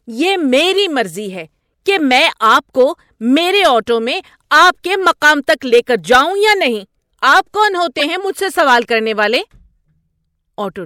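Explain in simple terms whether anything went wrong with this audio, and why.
A corrupt frame was decoded: damaged compressed data was played anyway, putting brief chirps or noise bursts into the speech at 0.77–0.79 s, 6.61 s, and 7.97–8.04 s, the last sounding loudest.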